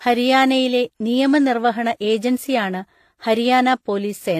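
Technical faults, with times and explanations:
Throughout, transcoding between lossy codecs: likely a low-rate HE-AAC encode re-encoded as WMA, so both codecs' artefacts stack and nothing remains above 15 kHz.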